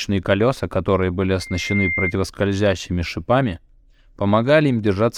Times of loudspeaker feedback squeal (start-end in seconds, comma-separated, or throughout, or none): 1.40-2.13